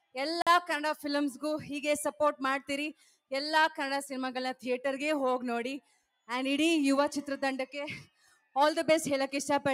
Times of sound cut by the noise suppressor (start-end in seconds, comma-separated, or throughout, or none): 2.94-3.32, 5.81-6.29, 8.07-8.56